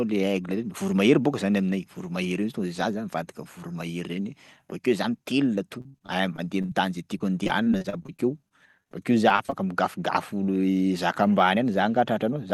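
Speech with repeated packet loss, giving a robotic, choppy sound from 5.81 to 6.71 s, where gaps up to 76 ms are bridged by stretching the last sound over about a quarter of the span, and again from 7.19 to 9.54 s with many shorter, sub-30 ms holes.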